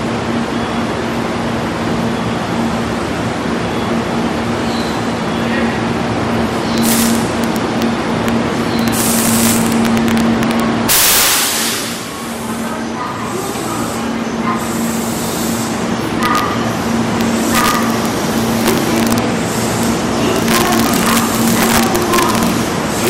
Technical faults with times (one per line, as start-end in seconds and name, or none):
6.78-7.82 integer overflow
8.28 integer overflow
8.79-11.63 integer overflow
16.23-16.39 integer overflow
17.21-19.18 integer overflow
19.83 integer overflow
20.36-22.50 integer overflow
23.04-23.09 integer overflow